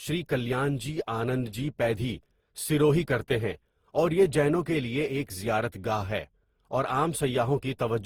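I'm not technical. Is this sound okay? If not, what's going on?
No. All the way through, the speech sounds swirly, smeared and hollow, and the starts of sounds are blurred. That points to generation loss: the recording was most likely squeezed through the same kind of compression and unpacked again around seven times, each pass adding its own damage. Compressing it once, however heavily, tends to sound thin or muffled but steadier; here the warbling and hollowness pile up beyond what one pass would cause.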